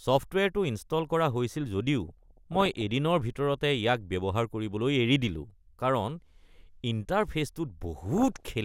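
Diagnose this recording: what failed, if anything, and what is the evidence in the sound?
DAB burbling, a reception fault surfacing in the MP2 codec: short noise blips and level jumps cover the speech from 2.08 to 2.81 s and from 8.06 to 8.46 s. Residual bit errors, pointing to roughly 0.7 percent, corrupt samples and scale factors, so short noise blips appear in single sub-bands and sub-bands jump in level for up to a frame.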